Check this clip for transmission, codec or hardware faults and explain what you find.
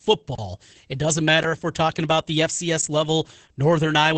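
Two faults turn up here. Throughout, there's heavy Opus voice compression. The SILK coder's coarse excitation makes the speech muffled, hoarse and a bit robotic, and nothing survives above 8.8 kHz. That fits a low bitrate around 10 kbps. Then from 0.35 to 0.38 s there's a 32 ms block of digital silence, where samples were zeroed, likely because the buffer wasn't filled in time. It's a short hole with hard edges.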